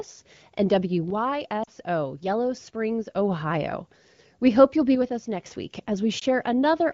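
It's a speech clip, and there are two separate problems. From 1.10 to 3.16 s, and again from 4.95 to 5.46 s just after "hope you'll be", the level suddenly sags by about 6 dB and then jumps back. That's most likely one channel dropping out, so the mono sum loses half of the shared signal and anything that was only in the lost channel. There are also lost AMR speech frames. At 1.63 to 1.68 s about 40 ms goes missing, which fits two frames, and the decoder's concealment leaves a short dip toward near silence. At 6.19 to 6.24 s a single frame's worth gives a quick warble before the sound recovers a touch rough. All of it comes through the AMR wideband (HD Voice) codec, which sounds like one of its higher rates, around 15.85 kbit/s, with only light coding damage.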